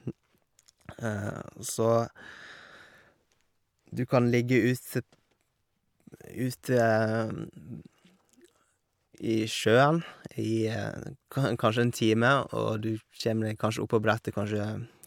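A speech recording, and nothing is technically wrong with it.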